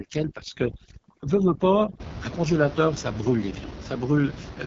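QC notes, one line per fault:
Throughout, AMR wideband (HD Voice) codec: speech sounds rough and raspy with nothing above 6.9 kHz, which fits the codec's lowest 6.6 kbit/s mode starving its vocal tract model.
0.00 to 2.00 s, overdone noise removal: background drops and breaks up into twinkling specks, as bands near the noise estimate get switched off.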